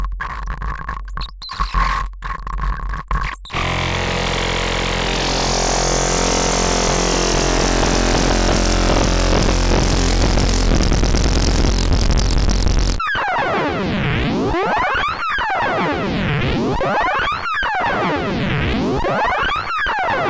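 Throughout the 20-second clip of sounds, everything runs slow and sits low: the wrong sample rate stretches time to about 0.73 of normal speed and drops pitch by about 5.5 semitones. Audio stored at one rate is being clocked out at a slower one with no conversion, a ratio that fits 22 kHz material played at 16 kHz. What separates this from a deliberate pitch shift or time-stretch is that speed and pitch fall together, by the same ratio, with no processing artefacts.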